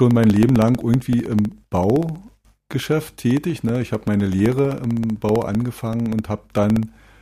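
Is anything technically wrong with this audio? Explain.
Yes. From about 0.11 s to 7.15 s there are periodic USB or driver dropouts, repeating every 64 ms, around fifteen a second. Each time something stalls the USB bus or audio driver, roughly a millisecond of audio is lost and replaced by silence. This produces a steady, rapid ticking that rides on the signal. A waveform shows evenly spaced notches dropping to near silence, and a spectrogram shows thin vertical broadband lines at regular intervals.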